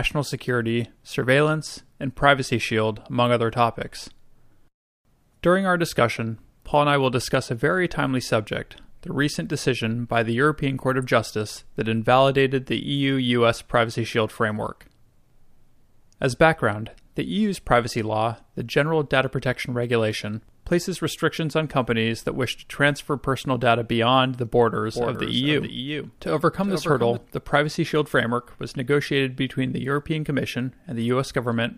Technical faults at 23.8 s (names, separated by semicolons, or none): none